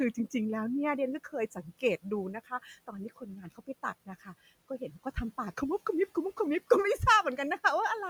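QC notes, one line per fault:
2.87 to 3.84 s, speech cut by the noise suppressor: within this stretch, roughly a third of a second of the speech is pulled down, at worst by about 15 dB, so those parts sound swallowed and faint. The suppressor mistook the quieter, lower-energy parts of the speech for background and attenuated them along with it. The room noise, sitting about 24 dB below the speech, is part of the recording itself.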